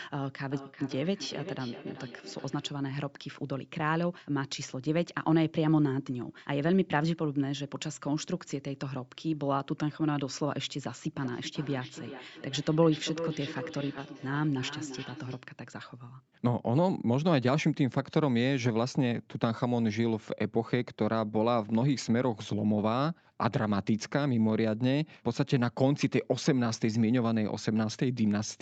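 Feedback echo between two devices appears in this speech clip from 0.49 to 2.8 s and again from 11.16 to 15.47 s. A second device in the room replays the call audio into the first microphone, and that device's echo canceller can't remove it, so each word returns roughly every 400 ms, thinner and ringier, peaking at about -16 dB and then about -12 dB below the speech. A skip ahead occurs at 13.97 s, where roughly a second of audio is dropped, probably discarded by an overfull jitter buffer, and the two sides are butted together with no gap. A jitter buffer speed-up follows from 14.08 to 15.1 s: to work off the excess delay, the receiver trims short pitch-period slices repeatedly, removing about a tenth of a second in total, so the speech runs at 109% speed without changing pitch and sounds hurried. The audio stops at 8 kHz, which fits a wideband Opus call path at around 64 kbps.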